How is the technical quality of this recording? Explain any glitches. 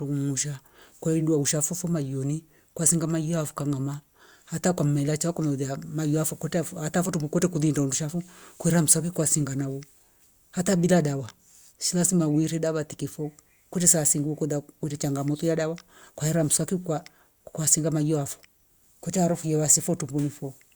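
No technical glitches can be heard anywhere in this recording. There is nothing in the audio that needs explaining.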